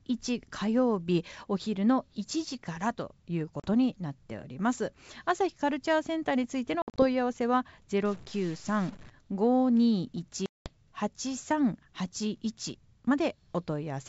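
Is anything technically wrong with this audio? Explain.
Yes. The speech is carried on G.722 wideband telephone coding, clear up to about 7 kHz in a way that fits the 64 kbit/s mode, but there are two kinds of fault.

Packet loss on an ADPCM call, at 3.60 to 3.69 s, 6.82 to 7.05 s and 10.46 to 10.70 s: each is a hard-edged hole of silence, after which the speech comes back slightly distorted and settles within tens of milliseconds. The first gap is 40 ms, roughly two packets. The second is 120 ms lost in pieces over 160 ms, the longest run 60 ms, several packets in all. The third is 200 ms, around ten packets. Once packets go missing, the decoder's adaptive predictor and step size no longer match the sender's, so the resumed audio is decoded with the wrong state until it re-converges.

Stuck bit, from 8.05 to 9.10 s: a distortion rides on the speech, and the pauses fill with noise instead of falling quiet. 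The likely cause is a single data bit held at 0 or 1 by a broken line or converter. That shifts roughly half the sample values by the bit's weight in a waveform-dependent pattern, and small values near zero flip around it, which puts noise into the pauses.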